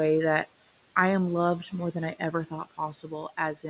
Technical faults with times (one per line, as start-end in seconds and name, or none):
0.00-3.70 noise suppressor artifacts
2.19-3.12 speech cut by the noise suppressor